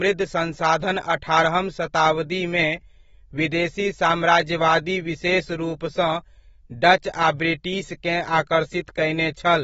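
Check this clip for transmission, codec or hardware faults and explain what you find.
One codec fault runs through the whole clip. Throughout, there is AAC compression, likely at a low bitrate around 27 kbps with AAC-LC. Nothing is present above 7.7 kHz, and the speech sounds dull, with plainly audible warbling and fizz on sibilants. A simple low-pass filter would not add that texture.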